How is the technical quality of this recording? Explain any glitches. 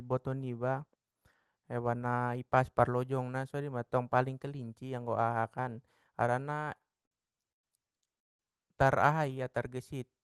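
The recording has three timing glitches in its final seconds, all from the call's jitter buffer, heard over Opus coding that cuts the highs off around 12 kHz.

Repeated stalls (stutter), 6.65 to 7.65 s: packets arrived late over and over, so the buffer kept running dry and the receiver stretched the last sound through about fourteen short gaps, the longest 116 ms. Roughly 30% of that second is filler, so the speech drags and stutters while nothing is lost.

Call audio freeze, 8.19 to 8.41 s: the audio halts for about 200 ms of near silence, then resumes exactly where it stopped. The likely cause is packets held up in transit, emptying the buffer and forcing it to raise its delay by that same amount.

Jitter buffer slow-down, 9.16 to 9.76 s: to rebuild its reserve, the buffer repeated single pitch periods or bits of pauses many times, adding 61 ms. Speech runs at about 91% speed with unchanged pitch, so sounds come out drawn-out.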